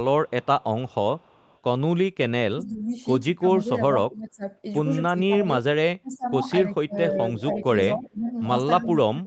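From 0.27 to 1.58 s there's a faint echo leak: a copy of the speech trailing about 290 ms behind, very quiet and well under the talker. It's likely a far-end loudspeaker whose echo canceller let some pickup slip back down the line.

Then from 2.52 to 4.45 s the speech dips in patches totalling around a second, dropping by about 20 dB. That's speech suppressed in double talk, most likely the canceller ducking the talker while both sides spoke. It happens again from 5.12 s to the end, with the dips reaching about 25 dB.

Inside that stretch, from 7.37 to 8.06 s, the echo leak comes back much stronger. The same roughly 290 ms delayed copy sits only about 10 dB below the speech.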